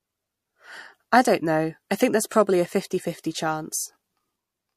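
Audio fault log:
2.29 to 2.31 s, pre-echo: a brief hiss, about 23 ms long, swells up just ahead of a sharp speech onset, sitting about 14 dB above the quiet moment it fills, and the attack itself lands soft and smeared. The codec spread quantisation noise meant for the loud onset across the whole transform block, including the silence before it; the smear length fits a block of around 36 ms, with no switch to shorter blocks for the transient.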